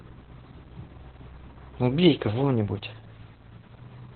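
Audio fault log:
Throughout, Opus voice compression: the codec is running in its narrowband SILK mode at a very low bitrate, which fits about 8 kbps, so nothing survives above 4.5 kHz and the excitation is coded coarsely. The speech sounds heavily muffled, hoarse and slightly robotic.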